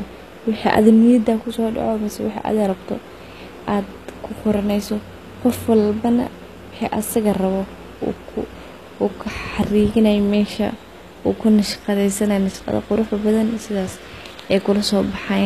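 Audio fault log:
throughout, low bit depth without dither. Speech sounds grainy, with distortion tracking the signal about 40 dB down. Likely truncation to about 9 bits, so rounding error follows the voice.
throughout, HE-AAC compression. Nothing above 14.9 kHz, and s sounds turn metallic and lispy. Likely HE-AAC near 24 kbps, rebuilding the treble from copied lower bands.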